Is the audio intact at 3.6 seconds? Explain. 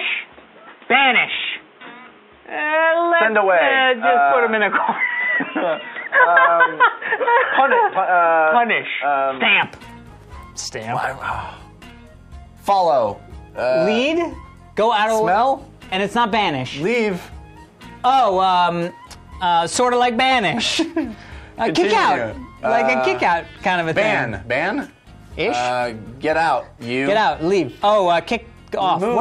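No, at 3.6 s the sound is band-limited. From the start until about 9.63 s, nothing gets through above 3.8 kHz, so everything comes across dull and a bit boxy. There's also a faint background noise well under the signal, though the overall level hardly moves. At 9.63 s it opens back up with no gap. That pattern likely comes from an input switched to a poorer device, such as a headset in call mode with its narrower band and its own noise.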